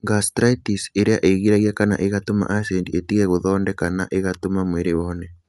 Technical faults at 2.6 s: Bluetooth LC3 compression

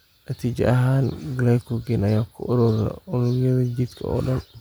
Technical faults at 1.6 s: none

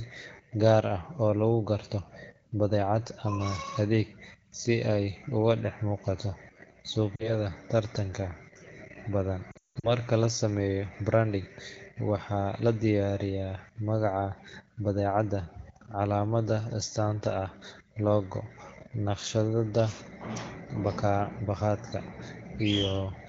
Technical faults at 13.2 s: none

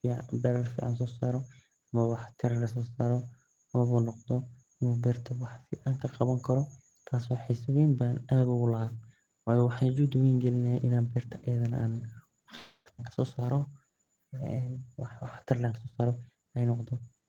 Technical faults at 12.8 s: call audio freeze

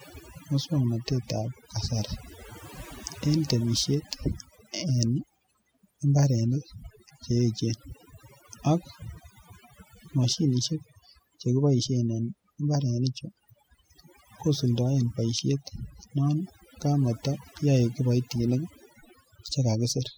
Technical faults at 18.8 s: overdone noise removal

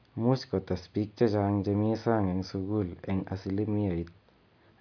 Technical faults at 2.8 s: none

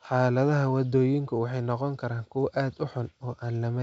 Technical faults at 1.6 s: none

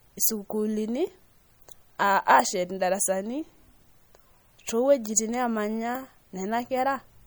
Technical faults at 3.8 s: MP3 compression

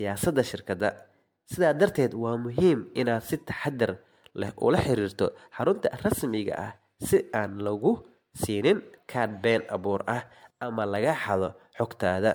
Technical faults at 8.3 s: generation loss

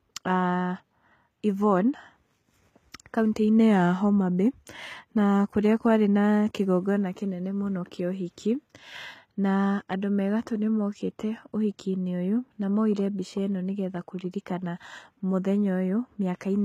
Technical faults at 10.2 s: HE-AAC compression

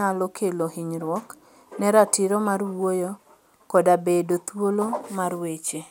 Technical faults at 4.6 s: none

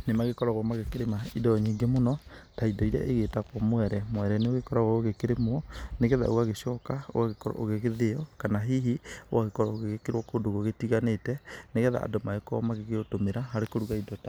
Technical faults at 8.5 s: none

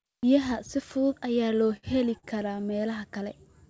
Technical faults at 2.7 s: repeated stalls (stutter)

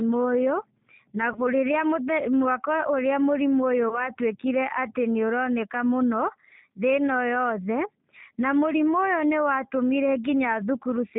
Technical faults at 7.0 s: G.729 codec

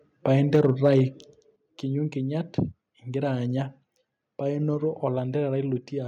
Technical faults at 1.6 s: microphone volume stepped down

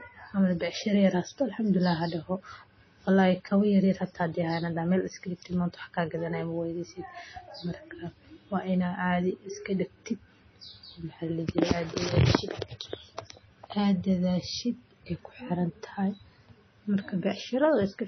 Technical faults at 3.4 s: MP3 compression

